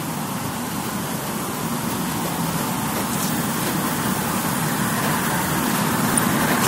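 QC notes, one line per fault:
Throughout: MP2 compression. The sound is dull, with the top end missing and a gurgling, granular roughness on what remains. This is likely MPEG Layer II coding at a rate around 80 kbps. The bit budget is too small to fund all 32 sub-bands, so the upper bands are dropped and switch on and off from frame to frame. The surviving bands are quantised coarsely, which gives the grainy texture.
6.01–6.27 s: DAB burbling. A quarter-second burst of burbling sits over the sound near the end of the clip. Bit errors, at a rate of well under one percent, slipped past error correction into the Layer II data. Corrupted samples put short blips of noise into single sub-bands, and corrupted scale factors make sub-bands jump in level for up to a frame. The errors hit 11 frames.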